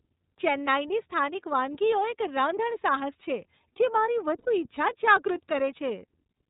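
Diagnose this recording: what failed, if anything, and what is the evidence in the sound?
Codec stage: the speech is band-limited with nothing above 4 kHz and has a plainly audible rough, slightly synthetic texture. That fits iLBC codec coding, likely at 13.33 kbps with 30 ms frames. A simple low-pass filter would dull the sound without adding that buzzy grain.

Network stage: from 4.39 to 4.48 s, about 90 ms, the speech turns into a held, faintly buzzy vowel. This matches lost iLBC frames, probably three 30 ms frames, with the decoder repeating the last pitch cycle mixed with noise. A plain dropout would give silence or a click instead. Unlike predictive codecs, the voice is right again almost immediately afterward.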